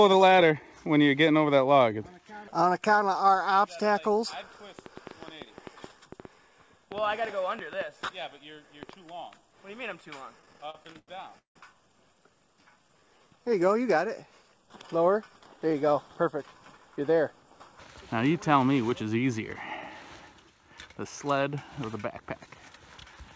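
A train of clicks runs from 4.79 to 8.90 s: about twenty irregularly spaced pops, roughly 5.6 per second and rising a little above the programme level, likely from electrical interference or a faulty connection or power supply. Repeated stalls (stutter) follow from 10.40 to 11.56 s, where twelve brief hold-ups are bridged by continuing the previous sound. These fill about 386 ms, a third of that span, and the longest lasts 169 ms, all because packets arrived late. A jitter buffer slow-down from 12.61 to 13.48 s stretches the audio to 87% speed, adding 123 ms by repeating pitch periods to rebuild the buffer's reserve. Two jitter buffer speed-ups, 15.57 to 16.32 s and 16.77 to 17.41 s, each run at 107% speed and trim around 50 ms of short segments to shed excess buffered delay. Throughout, nothing is present above 8 kHz, consistent with a wideband call codec such as G.722 on the WebRTC call path.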